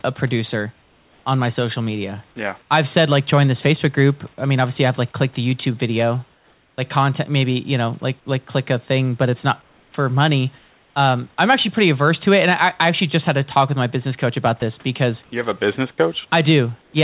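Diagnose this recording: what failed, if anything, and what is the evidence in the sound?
The speech is chopped from 0.82 to 2.70 s and from 14.60 to 16.94 s. Quiet syllable edges drop out, about 560 ms and 280 ms in total, and a steady hiss fills the gaps. That points to sound chopped by the voice detector in call processing, which likely switched transmission on and off repeatedly. Packet-loss concealment would instead smear or repeat the speech.

From 6.34 to 6.78 s and from 9.62 to 10.96 s, the real room background gives way to a flat, featureless hiss. The first stretch is about 3 dB quieter. This is likely comfort noise in place of the background, synthesised during discontinuous transmission. A noise gate would leave silence rather than hiss, and a dropout would leave a hard gap. Across the whole clip there is nothing above 4 kHz, consistent with a G.711 narrowband call path.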